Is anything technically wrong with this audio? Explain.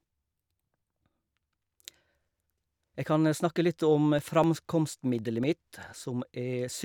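Yes. From 4.19 to 5.93 s, periodic USB or driver dropouts blank about a millisecond of speech every 0.25 s, giving regular ticks, visible as evenly spaced vertical lines and waveform gaps.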